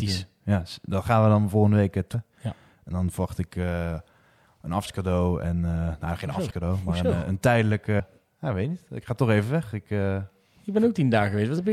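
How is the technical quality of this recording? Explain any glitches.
The speech has four short dropouts where compressed frames were skipped. At 2.13 s roughly 300 ms vanishes, at 4.85 s about 150 ms goes just before "en nou geen", at 6.49 s around 200 ms drops between "en nou geen" and "maar een een", and at 7.98 s roughly 200 ms is lost before "ja weet niet". Each time, whole 26.1 ms frames never got decoded, and the skips sound like somewhere between seven and ten frames. The audio jumps ahead at each join.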